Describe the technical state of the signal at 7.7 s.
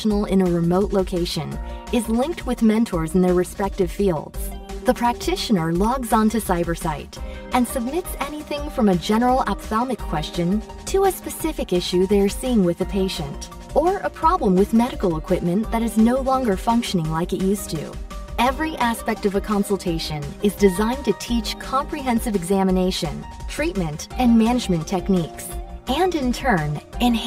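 At 7.7 s the signal carries channel delay (comb filtering), present throughout rather than starting there. One channel trails the other by about 5 ms, and when the two are summed to mono, content shared by both cancels at evenly spaced frequencies, the first near 100 Hz. The sound is hollow and phasey. A spectrogram shows fixed dark horizontal notch bands at regular spacing, unchanging over time, while the waveform looks normal.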